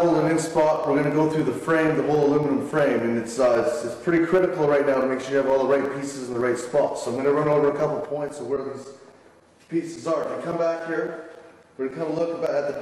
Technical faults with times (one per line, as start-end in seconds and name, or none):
none